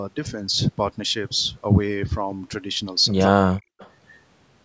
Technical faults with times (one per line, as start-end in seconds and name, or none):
3.20-3.25 echo leak
3.28-3.71 speech suppressed in double talk
3.79-3.90 echo leak